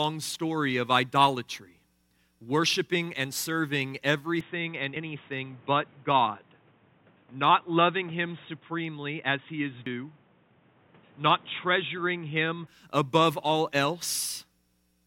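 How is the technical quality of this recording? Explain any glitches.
The recording has two audible problems: a stretch in the middle where the sound turns narrower and noisier, and two short skips.

Input switched to a poorer device, 4.41 to 12.67 s. The sound changes abruptly, with no gap at the switch, most likely because the input moved to a lesser microphone or a headset's call profile. Nothing above 3.8 kHz gets through, so the speech sounds dull and boxy, and a new background noise sits about 30 dB below the speech. The loudness stays roughly the same. At 12.67 s the full, clearer sound returns.

Audio missing between chunks, at 4.96 s and 9.86 s. At each point roughly a tenth of a second of speech drops out, and the audio on either side is butted together with no silence, so it is heard as a sudden jump. The two skips are about 5 s apart, which likely points to a recorder or processor working in 5-second chunks and losing a short piece each time it closes one block and starts the next.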